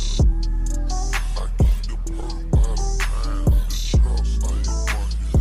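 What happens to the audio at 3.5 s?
Nothing goes wrong at 3.5 s: the audio at that moment plays through intact, with no dropout, click or distortion to be heard.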